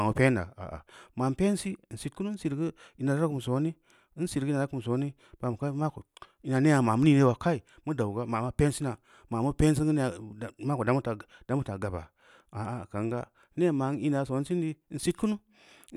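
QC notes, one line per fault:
No faults found in the speech; nothing to log.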